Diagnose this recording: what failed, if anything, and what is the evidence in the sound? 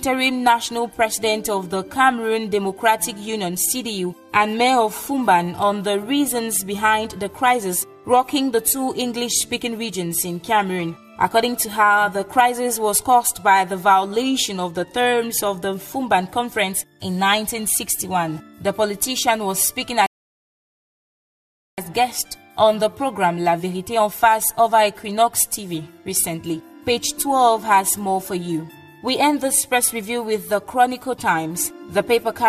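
A rebuffering stall at 20.06 to 21.78 s, a playback-stage failure fed by delivery from the network. The sound drops to dead silence for about 1.7 s and then picks up exactly where it broke off, with no skipped material and no repeated material. That continuity is the evidence: the player's buffer emptied before more downloaded data arrived, so output halted and waited. Nothing was discarded, but the running time grew by roughly 1.7 s.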